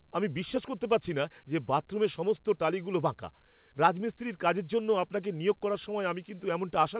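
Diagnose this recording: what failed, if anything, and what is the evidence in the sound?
Nothing failed here, and the sound gives no evidence of a fault: the top end stopping near 4 kHz is just the normal band limit of the G.711 call path.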